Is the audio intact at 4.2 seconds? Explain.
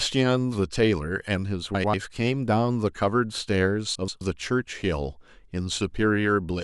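No. From 3.95 to 4.21 s the speech turns into a brief garbled flutter. This is frames out of order: two adjacent 128 ms blocks, each a run of four frames, were decoded in swapped order, so the second half plays before the first. No time is lost, so the speech carries on at the right place afterwards.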